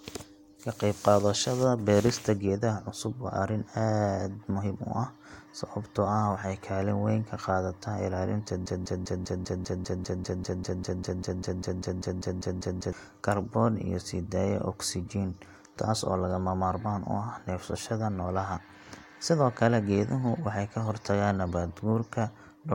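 At 8.66 s, after "weyn ka qaadataa ilaalinta", a broken-record loop starts. One 0.2 s fragment repeats exactly, 22 times, until 12.92 s. A stalled player or stream likely kept resending its last fragment. The speech is lost until "kaarboon iyo sii daaya".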